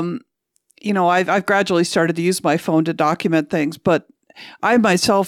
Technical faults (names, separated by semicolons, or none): sample clock jitter